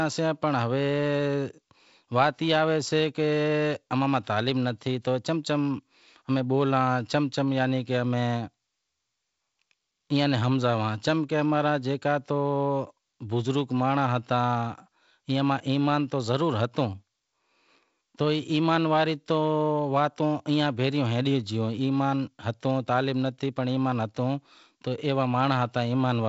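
No technical faults can be heard in this speech. The G.722 wideband telephone coding at 48 kbit/s shows only light coding damage, with a faint added noisiness and nothing above about 7.7 kHz.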